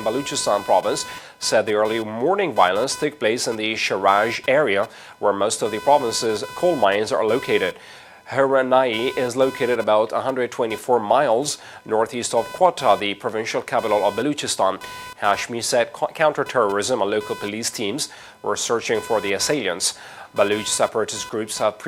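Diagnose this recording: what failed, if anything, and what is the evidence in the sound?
The analogue wiring stage failed: the audio circuit shares a ground with the computer, and load changes in the processor, graphics card or mouse shift that ground, injecting computer activity noise. For the whole recording, a buzzing, chirping layer sits roughly 20 dB below the wanted sound. It pulses at around 500 Hz and rises and falls with the machine's workload rather than with the audio itself, which points to a ground-coupling fault and not to a source problem.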